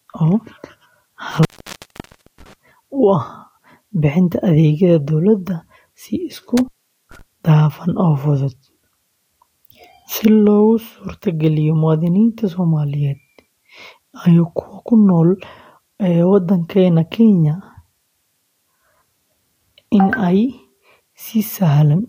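Intermittent contact shows up twice, like a loose plug or cable briefly opening. From 1.31 to 2.54 s the speech drops out for about 0.95 s, then from 6.57 to 7.21 s it goes for about 0.44 s, right before "dhafan oo fudud", with crackle at the edges.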